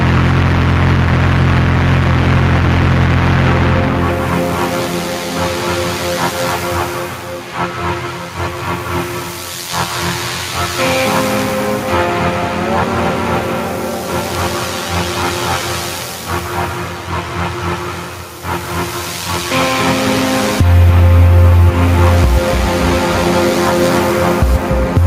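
Gain pumping runs through the whole recording, with the level swinging by roughly 5 dB. The likely cause is input gain set far too high, with a fast limiter or compressor clamping down on each peak. On a waveform the envelope looks flattened, loud and soft passages sitting close together.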